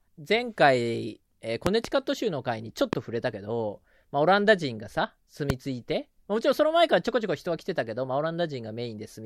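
Loud pops occur at 1.67 to 1.87 s (a double pop), 2.93 to 2.95 s and 5.50 to 5.52 s. Each is a sharp thump far above the speech, which continues beneath. Sudden voltage steps, likely from a plug, switch or static, entered the signal.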